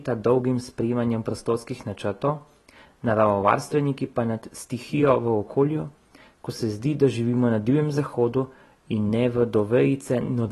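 Throughout, the speech is dull and swirly, with nothing above about 12.1 kHz, likely AAC compression at a low bitrate; unlike plain filtering, sibilants also warble and fizz.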